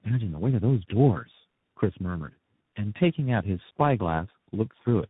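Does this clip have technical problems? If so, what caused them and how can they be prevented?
Yes. Tandem speech coding runs through the whole clip. The speech sounds rough, muffled and warbly from start to end. Nothing is heard above about 3.8 kHz. The roughness fits about three speech coders in a row, with plain G.711 links between them. Each coder decodes and re-encodes the last one's damaged output, so the errors stack. Prevent it by keeping one codec end to end or passing encoded frames through transcoder-free links.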